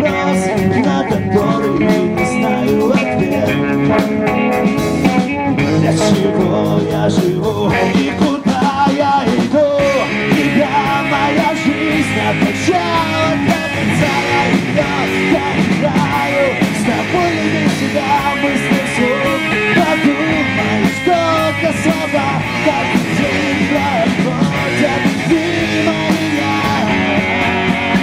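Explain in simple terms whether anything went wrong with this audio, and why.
Something did go wrong: hard clipping, from start to finish. The sound was pushed louder than the recording could hold, so its loudest peaks got sliced flat. Only a small fraction of moments hit that ceiling, so you hear brief crackly grit on loud bits.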